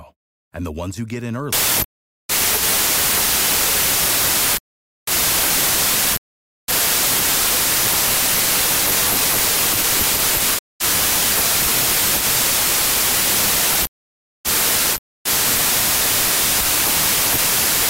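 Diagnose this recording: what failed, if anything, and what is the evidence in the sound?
A wrong sample width fault at the sample-format conversion stage. From 1.53 s to the end, the speech turns into loud broadband noise with the original only faintly audible underneath, slowed to 0.75 of normal speed and lower in pitch. This fits 32-bit integer data being read as packed 24-bit. Each sample is reassembled from mismatched bytes, so only fragments of the true high-order bits survive, and the extra samples produced stretch playback.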